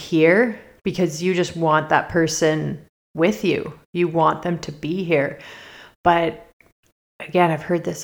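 No technical faults are audible anywhere in this recording.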